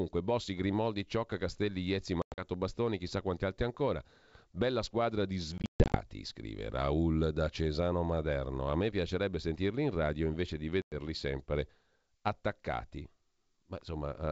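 Packet loss on an ADPCM call hits at 2.22–2.44 s, 5.58–6.05 s after "squadra di", and 10.82–10.94 s between "in radio invece di" and "sempre attaccati": hard silent gaps, then the decoder's predictor is out of step, so speech resumes with brief, slight distortion.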